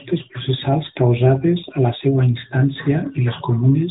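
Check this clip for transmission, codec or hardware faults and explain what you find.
The speech carries one fault from start to finish: AMR narrowband mobile codec damage, plainly audible throughout. The codec samples at 8 kHz and rebuilds the voice from a vocal-tract model excited by a few pulses per 5 ms subframe, so nothing above 4 kHz survives and the voice sounds buzzy and synthetic, in a way that points to a mid-range mode around 10.2 kbps. Simple 4 kHz low-pass filtering would sound muffled but still natural. That buzzy, modelled quality marks this as a speech codec.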